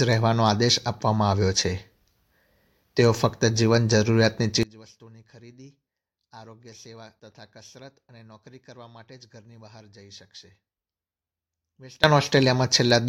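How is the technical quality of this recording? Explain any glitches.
The recording has one significant fault, an audio dropout to a faint residue, from 4.63 s to 12.04 s. For about 7.4 s the signal collapses abruptly to a faint leak roughly 25 dB below normal, then returns just as suddenly. This is likely a break in the source feed while the downstream path stayed live.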